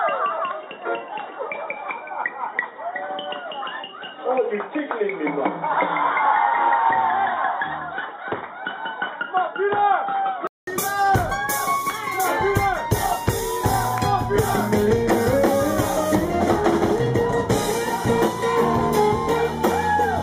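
From the start to 10.67 s the audio is dull and boxy, with nothing above 3.8 kHz and a faint added hiss well below the sound. At 10.67 s a 0.2 s gap precedes fuller, brighter sound at a similar level, likely an input switched to a poorer device. A spectrogram shows a flat ceiling at 3.8 kHz and a brief waveform gap.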